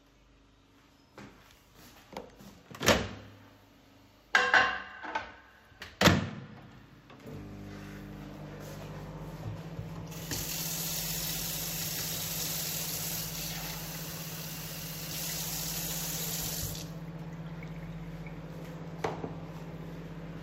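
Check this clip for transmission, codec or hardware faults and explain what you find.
Nothing stood out on listening to this recording.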